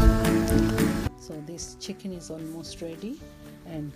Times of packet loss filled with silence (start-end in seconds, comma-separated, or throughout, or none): none